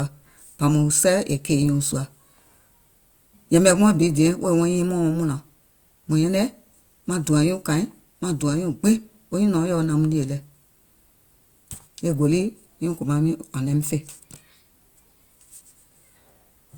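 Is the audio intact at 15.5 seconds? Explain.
No. At 15.5 s, as throughout, this is likely low-bitrate audio saved at a high bitrate: earlier heavy coding smears the speech detail, while the spectrogram stays empty above 20.1 kHz.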